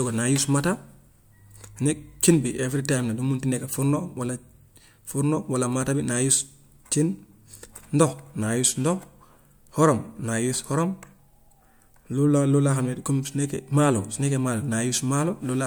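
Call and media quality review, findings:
No call or media quality findings to report for this speech recording.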